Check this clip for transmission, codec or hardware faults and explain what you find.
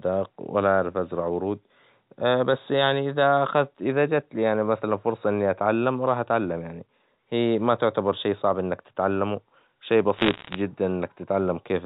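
One transmission fault appears near the end of the speech, carried over a G.711 telephone path whose band stops at 4 kHz. From 10.16 to 10.56 s there are bit errors on a digital phone line: a rate around one in every hundred and fifty bits corrupts single A-law samples, and flips landing on sign or high-order bits produce sharp, isolated ticks. Unlike packet loss, nothing drops out. The speech continues unbroken beneath a brief crackle.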